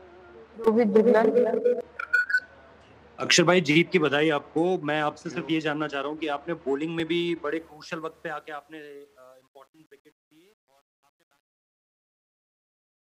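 At 0.64 s a repeated buffer occurs: playback ran short of fresh audio, so the same 2.67 ms piece sounded four extra times with hard joins, heard as a brief buzz. At 7.00 s a single repeat gives a short click. Both fit a 128-sample buffer.

From about 7.5 s the fade-out to the end carries truncation distortion on a fade. The level stage keeps too few bits without dither, consistent with a 10-bit path. From 8.50 s the quiet tail turns gritty.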